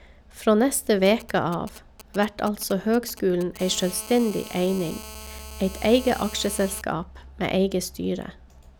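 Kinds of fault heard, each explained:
GSM signalling bursts: a nearby 2G phone sending short groups of radio bursts, rectified by the audio circuit, so the speech picks up a galloping dit-dit-dit of brief 217 Hz buzzes from 1.06 to 3.58 s, sitting roughly 15 dB below the voice.
GSM phone buzz: a nearby 2G phone transmitting continuously at its 217 Hz burst rate, as in a call, and the circuit rectifying each pulse, giving a steady, hard, raspy 217 Hz buzz rich in harmonics from 3.59 to 6.82 s, about 17 dB below the speech.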